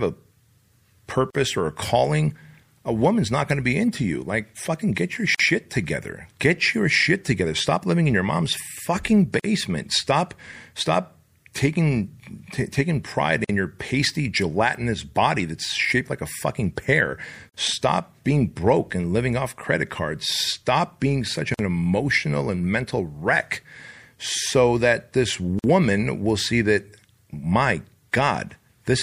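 From start to finish the speech has a watery, swirly quality, with a dulled top end, chirpy s sounds and softened consonant attacks. That points to MP3 compression, likely at a low rate that fits 64 kbps. Short of bits, the encoder lops off the treble and lets weak frequency lines blink in and out from frame to frame, which produces the warble.

Then there's the gap at a join of encoded pieces, a brief dropout every 4 s. It hits at 1.30 s (about 42 ms), then at 5.35 s, at 9.40 s just after "in your mom's fucking", at 13.44 s between "taking pride" and "your pasty gelatinous body", at 17.49 s, at 21.54 s between "cards stop being such" and "emotional and mental wreck", and at 25.59 s, each about 49 ms. The audio was encoded in chunks and spliced untrimmed, so encoder start delay and end-frame padding leave silence at every seam before the sound resumes where it stopped.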